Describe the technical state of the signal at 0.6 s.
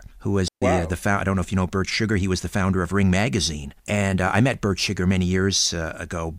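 At 0.6 s you're right inside a digital wireless dropout, which runs from about 0.48 to 0.62 s, so roughly 140 ms of the speech just goes missing. What's happening is the radio link drops too much data, and instead of playing garbage the receiver mutes itself behind a very quick fade. That's why you hear a clean hole of near silence with no crackle or noise burst on either side of it.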